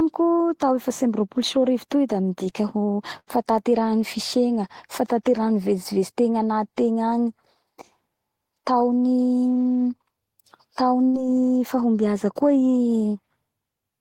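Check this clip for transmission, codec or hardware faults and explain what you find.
Two faults of the same kind turn up, both bursts of packet loss in the speech. Bursts of packet loss occur at 3.19 to 3.30 s and at 11.05 to 11.29 s. In each, a run of audio never arrived in time, so the receiver stretched the last sound it had for 80 ms and then 85 ms, fading it out, which gives a brief held buzz or dying hiss. About 60 ms of speech is missing each time before the audio picks up again further along.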